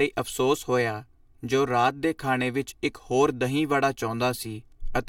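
Channel delay with comb filtering runs through the whole clip: one channel trails the other by around 3 ms, and summing them to mono cancels shared content at regularly spaced frequencies, starting near 200 Hz, leaving the speech hollow and phasey.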